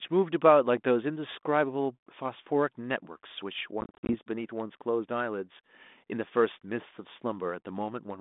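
Packet loss on an ADPCM call, 3.81 to 4.15 s, desynchronises the decoder's predictor: silent gaps up to 50 ms, then speech resumes slightly distorted.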